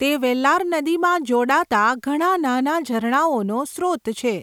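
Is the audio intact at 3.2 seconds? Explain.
Yes, at 3.2 s the speech runs cleanly, with no dropout, click or other fault.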